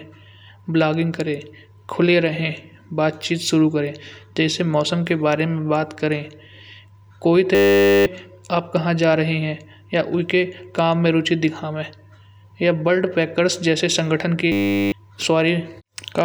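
A speech clip in which the playback system twice hit a system hang loop, with the driver stalling while the hardware replayed one 10 ms buffer. At 7.55–8.06 s and 14.52–14.92 s this becomes a steady 100 Hz buzz, losing roughly 0.5 s and 0.4 s of speech respectively.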